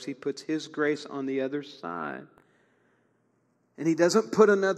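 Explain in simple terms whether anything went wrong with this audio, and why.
Something did go wrong: the two channels are drifting apart. Each side of this speech was captured by a device running on its own clock, and those clocks disagree by roughly 40 parts per million. Over the recording, one side falls behind the other, reaching a lag of about a fifth of a millisecond by the end. When the sides are combined, that creeping gap produces a slow, swirling flanging sound. A fixed offset would instead give a steady hollow tone that never moves.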